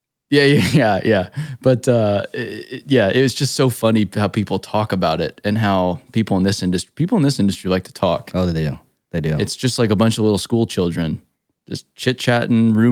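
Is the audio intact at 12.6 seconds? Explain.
Yes, the speech at 12.6 seconds is intact, with no audible fault at that moment.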